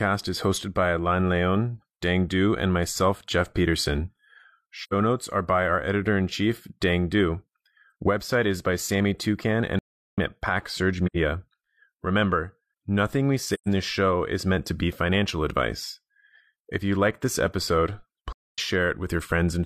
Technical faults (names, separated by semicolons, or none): AAC frame loss with muting; audio dropout to silence